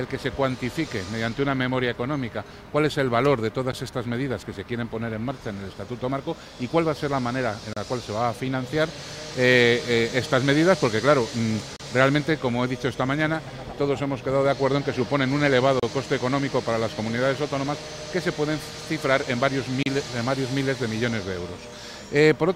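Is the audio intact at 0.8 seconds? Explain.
Yes, the audio is intact at 0.8 seconds, with no dropout, glitch or other technical fault at that point.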